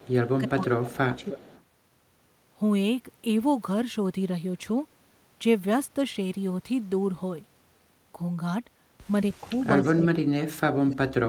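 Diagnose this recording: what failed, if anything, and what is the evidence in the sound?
Echo leak in call processing: a faint delayed copy of the speech, lagging by about 310 to 330 ms, appears at 0.0–0.29, 0.82–0.86, 1.18–1.63, 9.33–9.49 and 9.84–9.88 s, sitting about 15 to 35 dB below the direct speech. The likely cause is a far-end echo canceller that left loudspeaker pickup in its send path.

Speech suppressed in double talk, also in call processing: the speech dips by roughly 20 dB across 0.41–1.27 s, slightly at 9.56–9.66 s, and by roughly 40 dB through 9.82–10.97 s, overlapping the echo bursts. This likely comes from the canceller confusing overlapping talk with echo and attenuating both.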